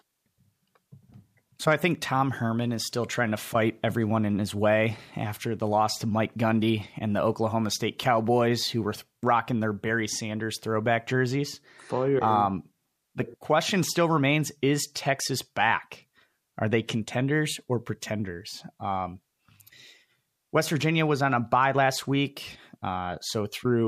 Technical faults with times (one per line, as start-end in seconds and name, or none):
none